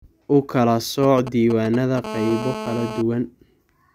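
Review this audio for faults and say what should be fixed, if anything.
From 1.03 to 1.99 s there are GSM signalling bursts: a galloping dit-dit-dit of ticks and short buzzy bursts at about 217 Hz, roughly 10 dB under the speech. A nearby 2G phone handshaking with its network sends short radio bursts, and something in the audio chain rectifies them into sound.

Right after, from 2.04 to 3.02 s, comes a steady GSM phone buzz, a hard, raspy 217 Hz tone full of harmonics at about 9 dB below the speech. That's the same phone now in a call, transmitting continuously at its 217 Hz burst rate, with the circuit demodulating every pulse.

To prevent both, keep phones well away from the mic, cables and interface during recording, or switch them to airplane mode, and use shielded, balanced cabling so stray RF has nowhere to get rectified.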